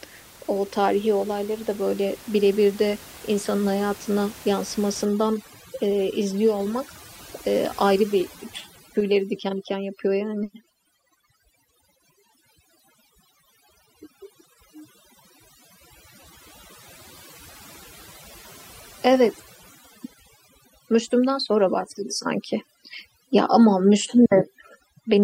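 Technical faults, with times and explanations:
5.05–25.24 s, overdone noise removal: the room noise, about 22 dB below the speech, collapses into near silence with twinkling specks. Noise reduction set too strong is shutting off frequency bands near its noise estimate, taking quieter speech detail with them.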